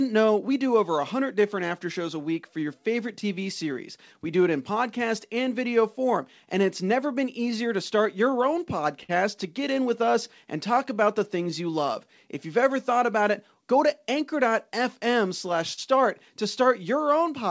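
From the very start at 0.004 s until 17.25 s, the speech has a faintly unsteady, dragging pace, with small hiccups spread unevenly through it. These are repeated timing corrections. The receiver keeps repeating tiny slivers of audio so that it can keep playing while data arrives too slowly. Together the edits play the stretch at about 97% speed and add roughly half a second. Every correction goes the same way: lengthening, never cutting.

That drift comes from clock drift between sender and receiver, the underlying fault that runs through the whole clip. The sender's audio clock ticks roughly 4% slower than the receiver's, so the jitter buffer keeps draining. The receiver can only keep pace by padding, which gives the irregular, slightly slowed tempo heard across the clip. The band-limited sound, with nothing above 8 kHz, fits a G.722 call path at 64 kbps.

At 9.03 to 9.11 s a sound is briefly held too long with a slight buzz or dip. 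This is a short stall from a late packet. The buffer ran empty, so the receiver stretched the last sound for 55 ms until the packet arrived. It then resumed from the same place, with nothing lost. The same happens at 15.73 to 15.79 s, where 42 ms is filled and the playback delay grows by that amount.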